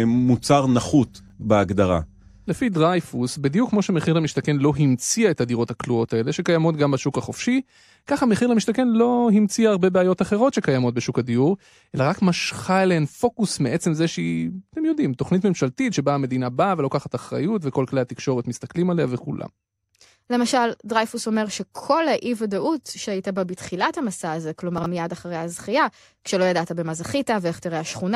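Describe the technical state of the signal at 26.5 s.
At 26.5 s the speech signal is intact, with no audible technical fault at that moment.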